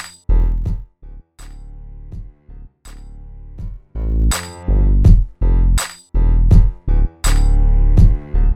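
From 0.36 to 0.96 s, zipper noise ticks through a fade down of roughly 25 dB. The level drops in 1 dB steps, about fifty a second, with no smoothing. Each step clicks. From 3.56 to 4.26 s, the same zipping rides a matching rise.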